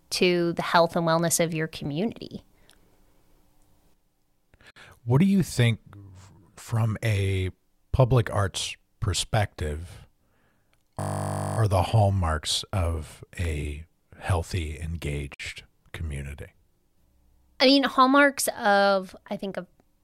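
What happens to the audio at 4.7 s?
At 4.71 s the speech breaks for about 57 ms, until 4.76 s: a gap at a join of encoded pieces, where encoder start delay and end padding were left in. Speech resumes exactly where it stopped, unlike a dropout, which loses sound.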